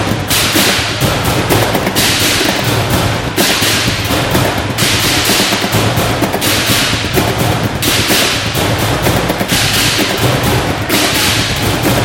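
Nothing in this clip sounds wrong to me; there's simply nothing here that calls for a fix.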